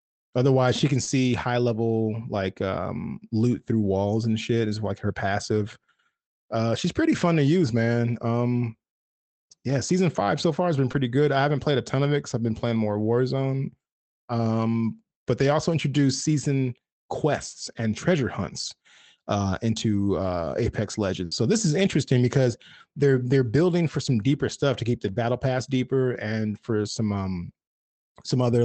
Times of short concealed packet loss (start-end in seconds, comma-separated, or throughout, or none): 1.03-1.09, 10.91-10.95